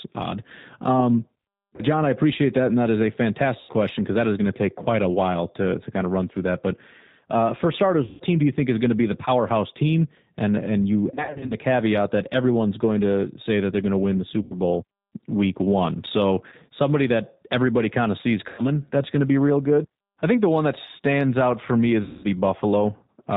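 The whole recording carries G.729 codec damage, plainly audible. It sounds like an 8 kbit/s G.729A stream. The speech is rebuilt from a filter and a few pulses per frame. Nothing above 4 kHz survives, and the low-bitrate model makes it sound rough and synthetic.

VoIP packet loss concealed by the speech codec strikes eight times: 1.76 s, 3.60 s after "that is a", 8.05 s, 11.14 to 11.55 s, 14.42 s, 16.49 s before "somebody that everybody kind", 18.49 s after "everybody kind of sees", and 22.03 s. About 30 to 210 ms of audio goes missing each time. At 11.14 s the losses are scattered, with a longest run of 60 ms. The decoder stretches the last sound into a fading buzzy tone or coloured noise, and the speech stays weak for a moment afterwards.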